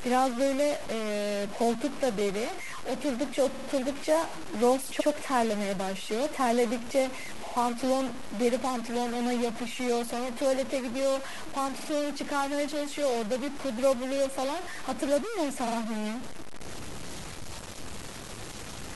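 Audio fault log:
throughout: stuck bit. A distortion rides on the speech for the whole clip, and the pauses are filled with a steady noise rather than falling quiet. The likely cause is one data bit held at a fixed value, which pushes about half the samples off by that bit's weight in a pattern that follows the waveform. Clipping distorts only the loudest peaks. This fault also fills silence, because the bit flips with the sign of small values.
3.52, 4.99, 7.45, 11.79 and 15.66 s: repeated frames. Short chunks of speech stutter. At 3.52 s a 46.4 ms block plays three extra times, adding about 139 ms. At 4.99 s a 69.7 ms block plays once more. At the last three times a 46.4 ms block repeats twice, adding about 93 ms each. These are exact replays of fixed-length coded blocks, not gaps or noise bursts.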